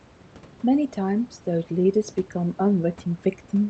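The speech shows no technical faults, with the call path's Opus coding leaving the audio band-limited to about 8 kHz and the room noise sitting about 27 dB below the speech.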